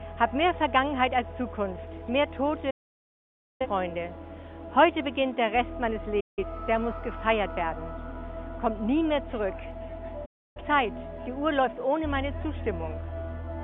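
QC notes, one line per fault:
2.70–3.66 s, 6.20–6.44 s, 10.25–10.62 s: digital broadcast dropout. The receiver muted on lost or corrupt frames, so sound fades in 8 ms to clean silence for 0.9, 0.17 and 0.3 s, then resumes with that material gone. Unlike a contact dropout, there's no click or crackle.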